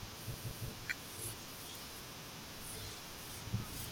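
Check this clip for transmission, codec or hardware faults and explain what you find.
The speech has a repeated buffer fault, heard twice. From 0.34 to 0.68 s, a 0.17 s piece of audio plays three times in a row. From 2.22 to 2.39 s, a piece of the same length plays twice. Each time, new audio reached the playback device too late. The device filled the gap by replaying its last block, which fits an 8192-sample buffer. Each repeat starts with a hard join, so these sound like stutters rather than clicks. No audio seems to be missing.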